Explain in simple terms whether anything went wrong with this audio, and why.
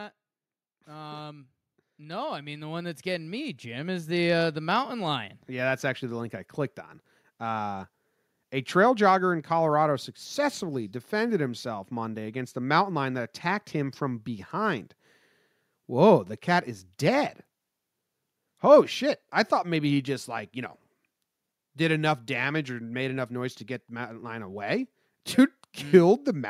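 Automatic gain rising, from 0.85 to 14.55 seconds: the recorder judged the input too quiet and kept turning itself up, slowly, for nearly fourteen seconds. Because it boosts everything at once, the speech and the background noise swell louder together.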